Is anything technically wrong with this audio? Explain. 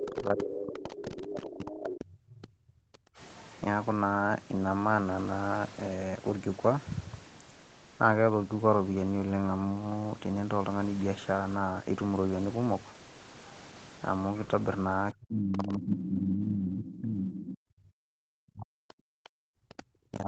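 Yes. The talker's speech is repeatedly pushed down while a second, fainter voice breaks through, with the sound band-limited to 8 kHz by the call path throughout.

Speech suppressed in double talk: from 0.0 to 3.18 s, and again from 15.13 s to the end, the voice sinks, thins and drops out in pieces, falling by about 35 dB and about 40 dB at its deepest. Likely cause: both sides spoke at once, and the echo canceller, unable to tell the talker from loudspeaker echo, attenuated everything.

Other side's voice leaking through: scraps of a second voice appear at 0.09–0.42 s and 0.93–1.0 s (about 15 dB below the speech), 15.54–16.09 s and 16.84–17.57 s (about 10 dB below), and 19.7–19.83 s (about 20 dB below). Likely cause: the echo canceller did not fully remove the far end's loudspeaker playback from the microphone.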